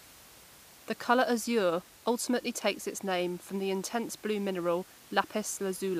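The speech comes through with no technical faults, and the faint room noise behind it sits about 24 dB below the voice as part of the recording itself.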